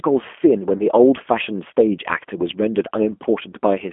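From the start the speech sounds rough, slightly synthetic and boxed in between about 250 Hz and 3.4 kHz. That is G.729 codec damage, and the coarse rebuilding points to an 8 kbit/s G.729A stream. From 0.78 to 0.84 s the voice turns briefly buzzy or noisy and weakened. That is VoIP packet loss concealed by the speech codec: the decoder extrapolated across 20 ms of missing audio, which fits a single lost packet.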